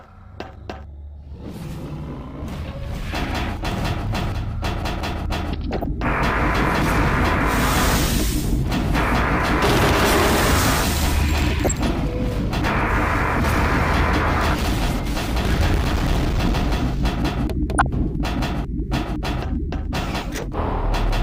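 Three short bursts of DAB burbling, at 5.71 to 5.86 s, 11.64 to 11.88 s and 17.75 to 17.86 s, add short blips of noise over the audio. Residual bit errors, a fraction of a percent, get past the error correction into the MP2 audio data, putting blips of noise in single sub-bands.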